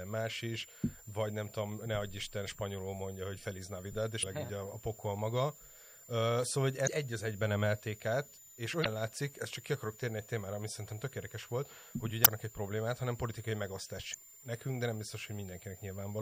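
A thin, steady whistle sits high above the speech for the whole clip, wandering between about 7.03 and 7.27 kHz and roughly 20 dB below the voice. That is a switching supply whistle: a power converter running in an audible burst mode or beating against another one, so its pitch shifts with the load. Underneath, quiet stretches and word tails turn gritty and grainy, the roughness following the sound itself at a level around 30 dB down. This is low bit depth without dither, likely from the audio being rounded to only a few bits, which fits something near 8-bit resolution, so the error tracks the signal rather than staying a smooth hiss. The whole clip also sounds watery and swirly, with sibilants going chirpy and metallic. That is plainly audible MP3 compression, consistent with a bitrate around 64 kbps, where the encoder drops weak frequency content that flickers on and off between frames. 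Five short glitches break in at 4.20–4.24 s, 6.83–6.88 s, 8.82–8.87 s, 12.22–12.27 s and 14.10–14.15 s, each lasting about 45 to 60 ms. These are damaged data in a compressed stream, where corrupted bytes make the decoder misread frames, lose sync and hunt for the next valid header.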